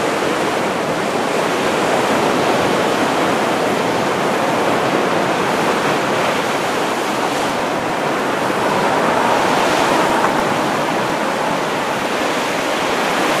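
Sound recording with periodic USB or driver dropouts from 7.40 to 13.30 s: tiny gaps of roughly a millisecond of silence every 0.1 s, heard as steady ticking.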